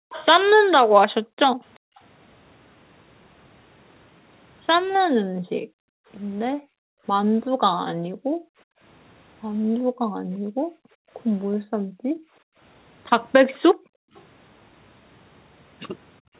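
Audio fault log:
0.00–1.97 s, 5.11–8.81 s, 9.84–12.59 s, 13.75–14.14 s, 16.21–16.34 s: background gated by the echo canceller. The room sound sinks or vanishes while the far end's loudspeaker plays. The canceller pulls the microphone down hard to stop that sound returning. The drops reach about 40 dB, and the last one reaches about 30 dB. Each gap adds up to somewhere between a fraction of a second and about two seconds. The background returns when the canceller lets go.
0.11–0.26 s, 1.75–2.00 s, 14.15–14.23 s: echo leak. A faint delayed copy of the speech slips through, trailing it by 379 ms. The first scrap sits about 20 dB below the speech, and the later two sit about 35 dB below. The likely cause is a loudspeaker on one side whose echo canceller missed part of what its microphone heard and sent it back. The copies are brief and narrow, limited by the 4 kHz ceiling of the call path.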